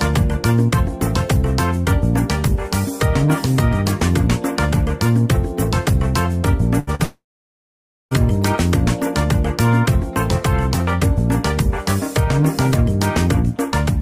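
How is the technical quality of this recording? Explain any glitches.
The recording has a cluster of network glitches between about 6.8 and 8.1 s.

At 6.79 to 6.90 s there is a burst of packet loss. About 80 ms of audio never arrived in time, and the receiver filled roughly 75 ms by extending the last sound while fading it. It is heard as a brief held buzz or hiss that dies away before the audio jumps ahead. On a spectrogram it shows as a short band of smeared, repeated harmonics or noise with decaying energy, ending at an abrupt discontinuity.

At 6.95 to 7.02 s comes short concealed packet loss. About 40 ms went missing, and roughly 42 ms was patched by continuing the preceding sound and blending back in. It is heard as a quick smear or wobble. On a spectrogram it shows as a thin vertical slice where detail blurs into a uniform texture.

From 7.03 to 8.14 s there is a long gap that sounds like no audio reaching the receiver, most likely a long network dropout. 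About 1.08 s is lost. The concealment briefly carries the last sound as a fading buzz or hiss, and then roughly 0.9 s of near-silence follows before the audio resumes further on. On a waveform this is a flat, almost empty stretch after a short decaying tail. On a spectrogram it is a dark block about a second wide.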